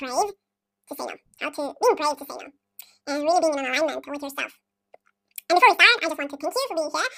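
Audio read two samples at a time (double speed), throughout: the reader treats each pair of samples as a single frame, as if the stream were stereo or wider samples, so the speech runs twice as fast and an octave high.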